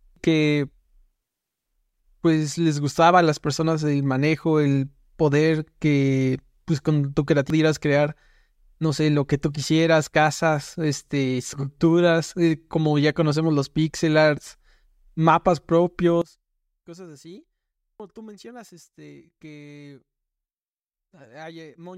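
At 0.16 s and again at 7.50 s, just after "que pues con tu", damaged data in the compressed stream makes the decoder lose sync, giving a brief blip that shows as a thin vertical smear. From 16.22 s to the end, the speech drops by about 21 dB and turns faint, likely from one channel inverted cancelling the centred voice in mono. The waveform shrinks sharply. At 18.00 s, another glitch from corrupted stream data cuts through this weakened section.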